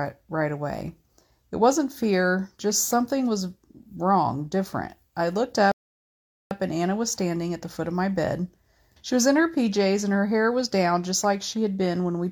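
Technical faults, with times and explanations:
5.72–6.51 s, rebuffering stall: playback ran dry of downloaded audio after "wrong different I looked", so the speech halts in silence for 0.79 s, then resumes exactly where it stopped.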